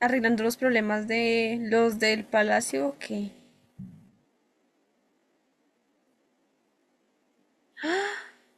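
From 1.72 s to 7.52 s the speech abruptly slows to 0.67 times its pace while pitch holds steady: a time-stretched section, likely software lengthening it by repeating short slices. The stretched speech drags, whereas slowed playback would also lower the pitch.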